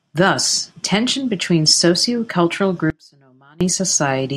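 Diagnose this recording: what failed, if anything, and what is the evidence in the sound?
The signal feeding the chain was briefly lost, likely at a loose analogue connection upstream, while everything after the break stayed live. The result is an audio dropout to a faint residue: the speech cuts out abruptly from 2.90 to 3.61 s, about 0.7 s, leaving only faint sound roughly 30 dB below normal level before it snaps back.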